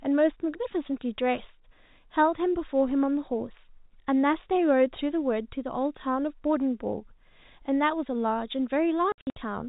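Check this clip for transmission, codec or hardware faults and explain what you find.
There's one real fault, right at the end. Between 9.12 and 9.36 s we get packet loss filled with silence: 180 ms of audio dropped across about 240 ms, in gaps no longer than 60 ms. The receiver just played nothing for the missing packets, so the speech gets chopped into holes with hard edges. The gap sizes fit roughly 30 ms packets. The band-limited telephone sound of the G.711 coding is there throughout, but that's just the format.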